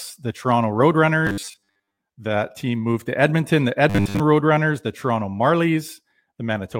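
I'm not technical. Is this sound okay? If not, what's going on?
No. From 1.27 to 1.98 s and 3.90 to 4.20 s, robotic sound from repeated short buffers: the speech turns into a metallic 100 Hz buzz, likely from audio arriving late.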